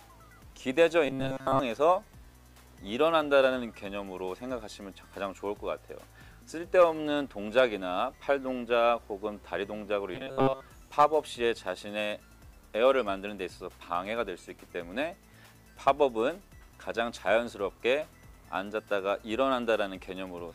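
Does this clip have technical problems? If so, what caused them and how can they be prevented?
Yes. Robotic sound from repeated short buffers occurs at 1.06–1.59 s and 10.15–10.61 s: a rigid, metallic buzz near 134 Hz. This likely comes from a roughly 7.5 ms buffer replayed to cover late data, skipping most of the real audio. Enlarging the playback buffer or fixing delivery delays would prevent it.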